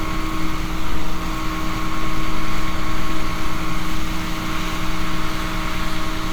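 No technical faults can be heard in this recording of sounds. The audio holds steady throughout, with nothing audibly going wrong at any moment.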